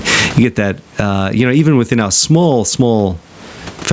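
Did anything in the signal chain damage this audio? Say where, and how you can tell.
Yes. Gain pumping throughout, likely a fast limiter in the call processing acting on excessive input gain: the gain swings around 25 dB, pulling down on each loud sound.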